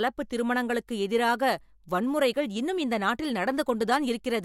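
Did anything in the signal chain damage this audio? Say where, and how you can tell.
No, nothing along the chain seems to have harmed this speech recording, and there's nothing here I'd point to as damage.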